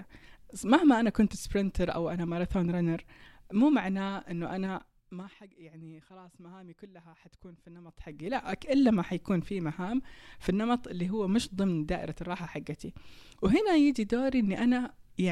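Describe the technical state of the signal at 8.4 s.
Zipper noise runs from 7.85 to 8.36 s and ends right at this moment. A level change of about 20 dB is applied in unsmoothed steps of about 3 dB, around fifteen per second. Each jump clicks, so the speech carries a ticking zip.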